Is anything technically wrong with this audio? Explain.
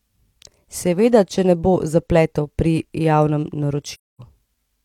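Yes. From 3.93 to 4.21 s, right after "bo zapletov pri javnem", the speech drops out in an AAC frame loss with muting. A hole of about 256 ms, which fits a run of six lost frames, was filled by the decoder with a zeroed spectrum, and the overlapping transform windows taper the sound down and back up. On a waveform it is a flat gap with ramped edges; a spectrogram shows a blank vertical band across all frequencies.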